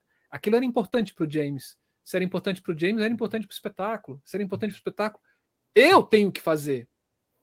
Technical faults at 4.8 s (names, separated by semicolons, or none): lost packet rebuilt from error correction; short concealed packet loss